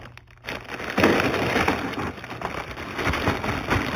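Throughout the clip, the audio shows imaging from linear upsampling. The sound appears to have been raised from an 8 kHz rate to 48 kHz by joining samples with straight lines, a weak interpolation filter. It leaves the top of the original band dulled and lets a mirrored copy of the spectrum through between 4 kHz and 8 kHz, roughly 20 dB below the signal. That faint image is heard as a thin metallic shimmer riding on the upper detail.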